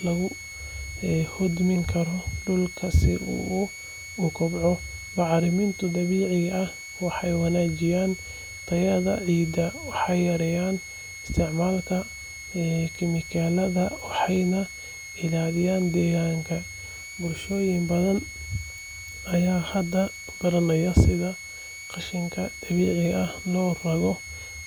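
A switching supply whistle runs through the whole speech clip: a thin high tone wandering between about 2.17 and 2.25 kHz, roughly 15 dB below the speech. It comes from a switching power supply cycling at an audible rate, and its interference leaks into the audio path.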